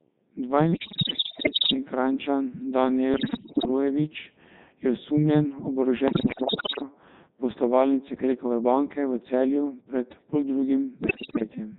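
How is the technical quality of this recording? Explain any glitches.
The technical quality is poor: the speech is carried through a very low-rate vocoder for the whole clip, and four bursts of corrupted data break it up further.

Codec 2 vocoder, throughout: the speech is heavily processed and has a robotic, buzzy quality, which fits Codec 2 at its 3.2 kbit/s mode. The decoder rebuilds the voice from sine waves using only pitch, voicing, energy and a spectral envelope, so the original waveform is gone. On a spectrogram the harmonics look unnaturally regular and smooth. The waveform appears synthetic rather than matching the recorded shape.

Bit errors on digital voice radio, at 0.73 to 1.74 s, 3.14 to 3.68 s, 6.08 to 6.82 s and 11.04 to 11.44 s: the voice suddenly lurches in pitch, loudness and tone colour and breaks into bleeps, warbles and gibberish. A sizeable fraction of bits are being flipped, most heavily in the first and third bursts. 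Each bit steers a whole frame's parameters, so a single error throws off that entire frame. A spectrogram shows the harmonic stacks jumping up and down frame by frame, and the waveform envelope steps abruptly between levels.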